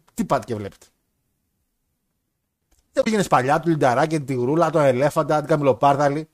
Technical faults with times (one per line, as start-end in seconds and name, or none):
2.99-3.07 damaged data in a compressed stream